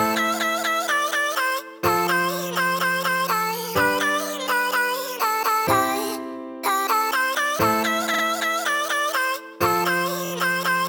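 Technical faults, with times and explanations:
8.13–8.22 s, repeated frames: a 46 ms stretch of compressed frames, consistent with two frames, was sent twice more, so that sound stutters and runs 93 ms longer.
10.24–10.31 s, repeated frames: a single 23 ms compressed frame was played three extra times, giving a quick stutter and adding 70 ms.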